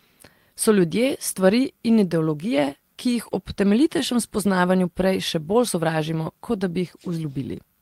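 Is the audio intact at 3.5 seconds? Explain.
No, not fully. At 3.49 to 3.51 s there is a lost packet rebuilt from error correction. About 20 ms of the speech went missing in transit, which points to a single dropped packet. The next packet carried a low-bitrate backup copy of that stretch, and the decoder played it in its place. So there is no silence or dropout. The patched 20 ms sounds rougher and noisier than the audio around it.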